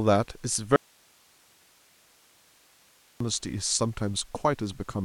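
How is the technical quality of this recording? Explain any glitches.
The recording has one serious glitch: an audio dropout to a faint residue from 0.76 to 3.20 s, about 2.44 s of lost speech. The signal cuts out abruptly, leaving only hiss roughly 35 dB below normal level, likely because the source connection broke while the recording chain after the break stayed live, before the speech snaps back.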